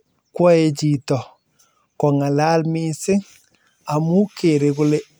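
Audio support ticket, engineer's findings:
No audible technical faults found in the speech signal: no dropouts, distortion or timing disturbances detected on review.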